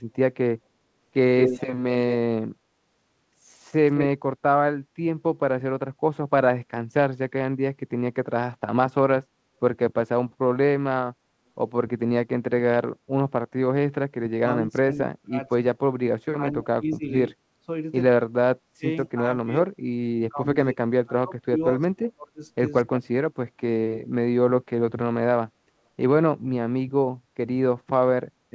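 Echo leak, 1.4 to 2.16 s: a copy of the speech returns about 217 ms late at roughly the same level as the original, likely loudspeaker pickup that the far side's echo canceller failed to remove.

Speech suppressed in double talk, 14.24 to 15.64 s, 16.34 to 17.1 s, 18.32 to 19.72 s and 20.29 to 23.16 s: the talker's level dips sharply, by roughly 25 to 40 dB at its deepest, in broken stretches, likely because the canceller mistook overlapping talk for echo and attenuated both.

Background gated by the echo canceller, 17.48 to 17.57 s: the room sound drops by about 15 dB for a brief moment while the canceller clamps the microphone, then returns. Through all of this the call path's band stops at 8 kHz, which fits G.722 wideband coding.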